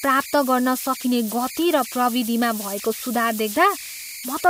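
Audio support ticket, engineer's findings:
Whistle near 2 kHz under the speech for the whole clip, clearest in the pauses, grainy texture on quieter syllables. Error sitting at about 13 dB below the signal. Probable component: delta-sigma ADC or DAC running without dither. Converter idle tones. With small input the modulator locks into repeating bit patterns, and those cycles come out as a steady tone. Worth checking the dither setting on that converter first.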